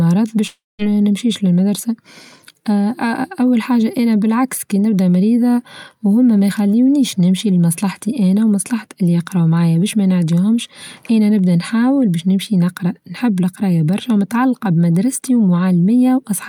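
From 0.47 to 0.82 s the speech breaks off. The last sound is drawn out into a fading buzz, then goes silent for about 0.2 s before speaking resumes at "نمشيش للمدرسة" with roughly a third of a second missing. This is likely a long network dropout. Unlike a brief packet-loss click, the gap is long enough for the concealment to die away into silence, and unlike a natural pause, the speech picks up mid-flow with something skipped.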